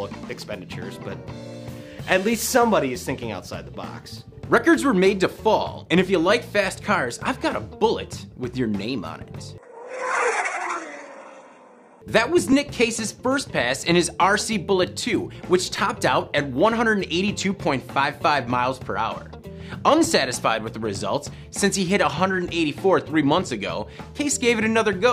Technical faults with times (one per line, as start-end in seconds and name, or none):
12.52 repeated buffer
15.76 repeated buffer